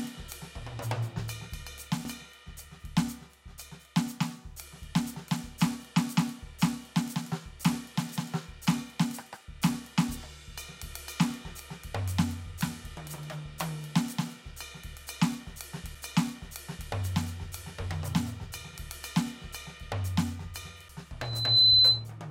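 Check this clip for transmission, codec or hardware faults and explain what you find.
Two kinds of fault are present in this music clip.

CD skips occur at 2.05, 15.95 and 20.89 s. A knock or disc flaw sends the laser to another turn of the spiral. Each is heard as a brief mute of a few milliseconds, a tick, then the music resuming from a different point.

A loudspeaker feedback squeal runs from 21.21 to 22.05 s. A microphone is picking up the speaker it feeds, and the loop gain exceeds one at 4 kHz. That tone swells over roughly 0.4 s to around 15 dB above the music.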